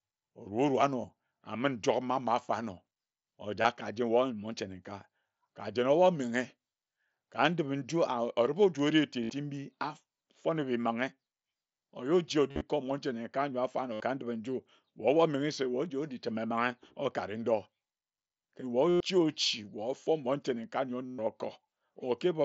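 Brief buzzy, held tones that warble slightly as the sound resumes occur at 1.02 s, 3.62 s, 9.24 s (just after "oju ori"), 12.51 s (scattered, just before "kor monche"), 13.93 s, 18.89 s and 21.06 s (just after "monche nenkae nyor"). They last from about 23 ms to 128 ms. This is concealed Bluetooth headset packet loss: packets from the mSBC headset link went missing, and the receiver filled each gap by repeating the best-matching recent stretch of waveform.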